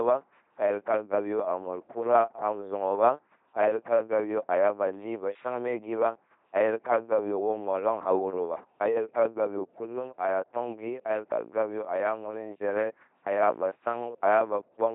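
Throughout, an LPC-10 vocoder at what sounds like 2.4 kbit/s rebuilds the speech from pulses or noise: heavily buzzy, robotic, nothing above 3.8 kHz.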